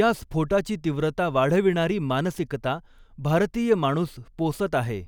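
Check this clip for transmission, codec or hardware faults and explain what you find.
Listening through the speech here, nothing turns up that sounds like a fault, so there's nothing to flag.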